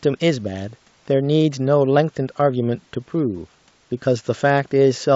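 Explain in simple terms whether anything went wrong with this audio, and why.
Nothing went wrong here: the speech came through an ordinary internet call connection working as it should, and the signs of that are the usual coding noise and a treble that stops at 8 kHz, which is normal for that kind of call line.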